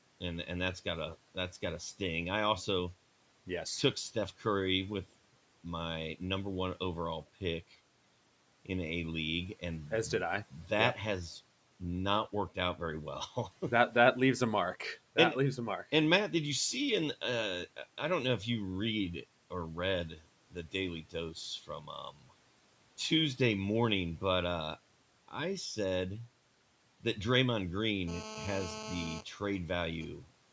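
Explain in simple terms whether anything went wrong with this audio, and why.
Speech cut by the noise suppressor: at 20.51–20.74, 21.63–21.88 and 22.11–22.31 s, bits of speech briefly go faint, as if swallowed, turned down along with the background.

GSM phone buzz: from 28.08 to 29.21 s a nearby 2G phone on a call causes a harsh, steady buzz at 217 Hz that has nothing to do with the speech.

GSM signalling bursts: from 29.22 to 30.07 s the same phone, its user silent, leaves a fainter pattern of even ticks with a longer buzz twice a second, not a continuous drone.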